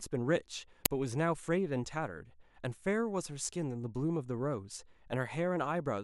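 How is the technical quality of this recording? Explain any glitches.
The recording has one clear glitch. At 0.86 s there is an uninitialised buffer: a single 5 ms block was played out before any audio had been written into it, so whatever stale memory it held was reproduced as samples, producing a loud crack in the speech.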